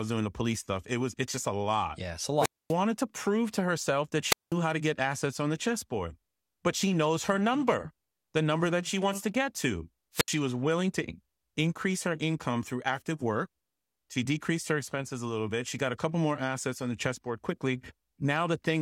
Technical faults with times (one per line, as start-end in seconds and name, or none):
2.37-2.75 wireless microphone squelch dropout
4.28-4.54 wireless microphone squelch dropout
10.13-10.32 wireless microphone squelch dropout